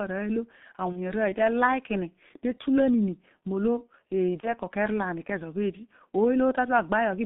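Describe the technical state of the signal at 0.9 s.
At 0.9 s the speech is muffled and hoarse, with smeared consonants and nothing audible above about 3.6 kHz or below 150 Hz. This is G.723.1 codec damage: a low-rate coder, consistent with about 6.3 kbit/s, rebuilding the voice from a coarse, slowly updated model in 30 ms frames.

From 0.92 to 0.98 s the sound turns into a short stretched, fading smear. This is VoIP packet loss concealed by the speech codec. A gap that fits one lost 30 ms frame was filled by extrapolating the previous pitch and filter at falling gain.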